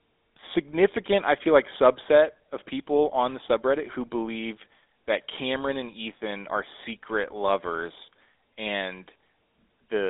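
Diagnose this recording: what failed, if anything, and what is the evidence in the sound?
The fault is at the codec stage: the speech passed through the GSM full-rate codec throughout, which fits a 13 kbps call. Its pulse-driven vocal-tract model adds a plainly audible buzzy, gravelly roughness, and the band runs from 300 Hz to 3.7 kHz, with nothing above 3.8 kHz.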